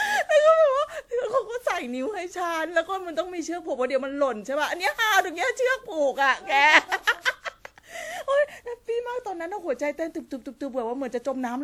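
Right from the start and all the way through, the speech has that swirly, hollow, smeared quality of generation loss, with attacks blurred and content running up to about 20.1 kHz. It's likely from repeated lossy encoding, something like WMA at 96 kbit/s applied around five times.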